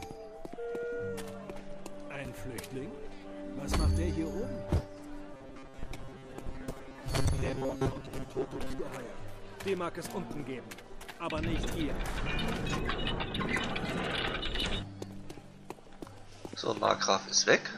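From 5.34 s to 8.81 s the sound turns robotic, with repeated short buffers. It collapses into a rigid metallic buzz at 134 Hz, likely because roughly half the audio arrived too late and was replaced by repeats of the last 7.5 ms, skipping the real signal.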